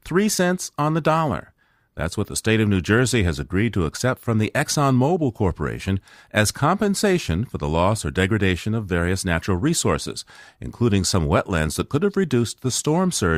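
No faults can be heard.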